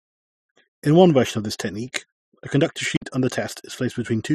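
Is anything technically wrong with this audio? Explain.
Yes. From 2.96 to 3.02 s there is an intermittent contact. A loose connection opens for about 50 ms. The speech drops out, with crackle at each edge.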